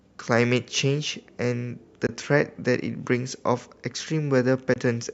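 At 2.06 to 2.09 s and again at 4.73 to 4.76 s the speech cuts out briefly, each gap a short silence with hard or very quickly faded edges. These are Bluetooth dropouts, likely caused by audio packets failing to reach the headphones in time and being discarded. About 19 ms of sound goes missing each time, which fits a single lost packet, and the speech resumes further along as though it had kept playing.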